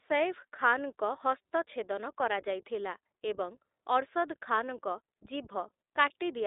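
From start to finish the speech passes through the iLBC codec. It is a narrowband VoIP coder, and nothing above about 3.8 kHz survives. The band sits roughly between 300 Hz and 3.7 kHz, so the sound is thin and boxed in. Each short frame's excitation is coded on its own, which points to 20 ms frames and fits a rate near 15.2 kbps. The codec damage is plainly audible. The speech stays clear but sounds rough and synthetic.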